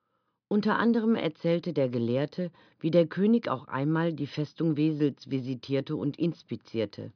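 No dropouts, glitches, distortion or timing errors turn up anywhere in the audio.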